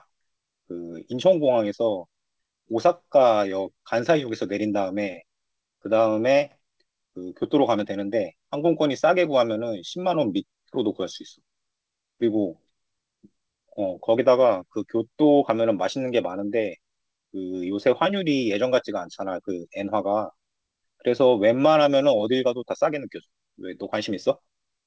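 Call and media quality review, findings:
No faults found; call path audio band-limited near 8 kHz.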